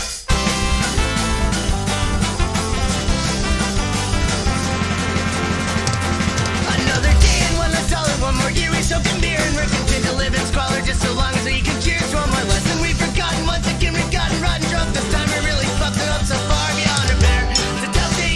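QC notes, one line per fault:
No faults found.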